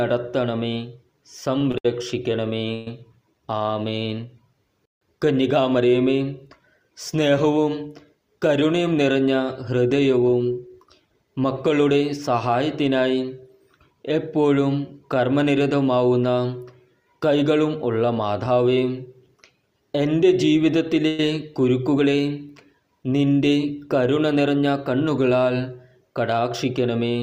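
From 1.58 to 2.88 s there are repeated stalls, a stutter. Packets were arriving late or too slowly, so the jitter buffer kept running dry. The receiver bridged five gaps by stretching out the last bit of sound, 243 ms in total, with the longest hold at 124 ms. That's roughly a fifth of that stretch being filled in. Nothing actually goes missing, but the audio drags and hiccups along.

At 8.62 to 8.95 s comes the first jitter buffer speed-up. The buffer was holding more audio than it wanted, so the receiver trimmed out tiny pitch-period-sized slices in quick succession, about 40 ms in all. Playback runs at about 110% for that third of a second. The pitch stays the same, but it feels rushed.

From 21.08 to 21.20 s there's a brief call audio freeze. The sound hangs and carries on as a 109 ms smeared continuation of what came just before, with no drop to silence. Then it picks up exactly where it left off, about 109 ms later than it should. 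That pattern is most likely packets held up in transit, emptying the jitter buffer.

At 24.17 to 24.74 s there's a second jitter buffer speed-up, a longer one. The receiver snipped out around 70 ms of short segments and ran things at about 111%. The result is the same hurried feel, with no change in pitch.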